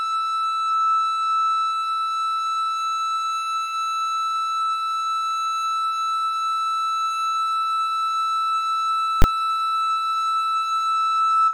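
This music clip has one loud bang at 9.22 s to 9.24 s. It is a case of invalid numbers at full scale. A calculation in the processing chain produced infinite or invalid values. These were clamped to the largest value the format allows. The output was pinned at one extreme value, far beyond the music's peaks, for a 20 ms block. The block is so short that the start and end pops merge. It is heard as a single sharp bang cutting through the music.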